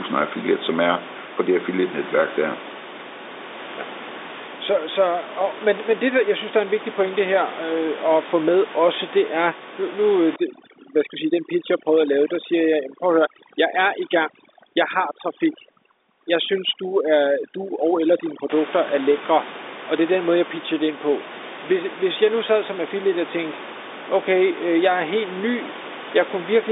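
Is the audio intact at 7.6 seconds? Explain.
Yes, the audio is intact at 7.6 seconds, with no fault to be heard at that moment.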